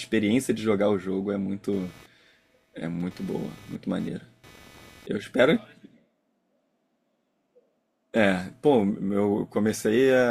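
From 1.73 s to 5.07 s, computer activity noise runs under the speech: a buzzing, chirping texture pulsing at around 300 Hz, roughly 30 dB below the speech. Changing load on the computer's processor, graphics or input hardware is disturbing the ground shared with the audio circuit. Unlike steady mains hum, it starts and stops abruptly, independent of the speech, and its rate isn't locked to the 50 or 60 Hz mains frequency.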